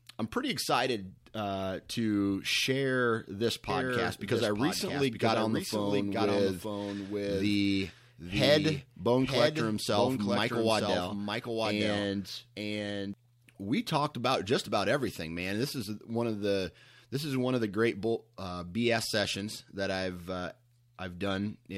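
A second capture path, or an edit holding two out-of-step copies, has likely mixed the speech in twice, producing a doubled audio track. From just after "uh to share this" at 3.70 s until 13.14 s, before "we talked about just", a full-band duplicate trails the original by about one second, somewhat quieter at roughly 5 dB down. It has no decay or room colour, and it starts and stops abruptly at those two times.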